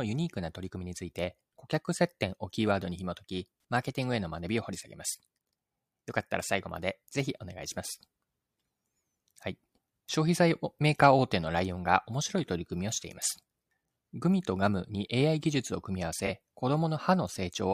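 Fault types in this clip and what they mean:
Corrupt frame concealed: the speech is hit at about 16.26 s, for roughly 40 ms. The cause is damaged data in the compressed stream: the decoder detected that two AAC frames were corrupted, discarded them, and papered over the gap itself, either by muting or by filling it with a scrambled copy of the last good spectrum.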